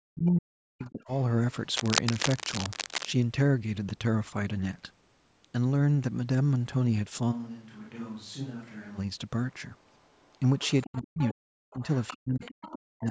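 From 0.02 to 1.11 s the speech is pulled down hard, by roughly 40 dB at its deepest, as speech suppressed in double talk. Both ends were likely talking at once, and the echo canceller, unable to tell the near talker from the loudspeaker echo, attenuated everything. Unlike a network dropout, the gaps line up with the other party's activity, and near the end of this stretch, from 0.84 to 1.22 s, the other side's voice leaking through is faintly audible, about 30 dB below the speech.

From 1.74 to 3.08 s cable scratch noise rides over the audio at about 5 dB below the signal. It is dense, irregular crackle that comes and goes in bursts, which separates it from steady hiss or static and points to a worn connector or lead being moved.

The remote voice leaks through again from 9.51 to 11.34 s and from 11.71 to 12.76 s, now louder at about 20 dB below the speech. The canceller likely leaves residual echo audible as a second talker rather than as a room reflection. 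Where the two overlap, the near speech is suppressed again: a drop of about 40 dB from 10.89 to 11.39 s, a brief, shallow dip of about 5 dB at 11.73 to 11.78 s, and another deep cut from 12.13 s to the end.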